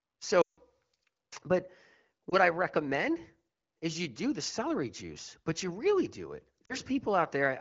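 At 0.42 to 0.59 s the speech drops to near silence within two frames before resuming thin and rough, the mark of lost AMR speech frames. The gap of about 160 ms fits a run of eight 20 ms frames that failed their checksum. The wideband decoder repeated the last good pitch and vocal tract settings at falling gain. Briefer dips follow at 2.30 to 2.36 s and 6.65 to 6.75 s, against light AMR-WB coding at 15.85 kbit/s.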